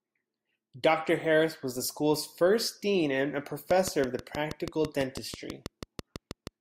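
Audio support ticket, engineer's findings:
Train of clicks from 3.71 to 6.48 s, kicking in right after "first dean and a". Steady ticking at about 6.2 per second, regular spacing, about twenty hits, peaking roughly 10 dB over the speech, audible in gaps too. Much the same pulse shape each time, so likely interference from nearby gear or a flaky interface injecting a periodic spike.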